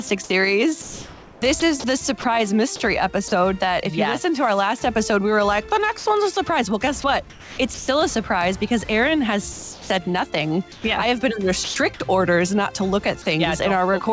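From 0.08 to 0.30 s, and again from 0.82 to 2.24 s, the sound turns choppy. About 80 ms is lost in the first stretch and about 680 ms in the second. This is sound chopped by the voice detector: the sender's detector likely toggled between transmitting and pausing several times, with comfort noise filling each gap.

At 3.28 to 3.32 s a brief piece, about 30 ms, gives way to comfort noise before the sound resumes. This is sound dropped by the voice detector: the sender likely judged quiet material to be background and stopped sending, and comfort noise was played in its place.

The chopped pattern returns from 5.98 to 6.36 s, with about 100 ms replaced, and from 7.02 to 7.88 s, with about 440 ms replaced.

Three more dropouts follow. The longest, at 9.52 to 9.90 s, swallows about 240 ms of sound. Shorter ones at 10.72 to 10.84 s and 11.64 to 11.76 s each lose around 50 to 60 ms.

Throughout, nothing is heard above 8 kHz, which fits a G.722 call path at 64 kbps.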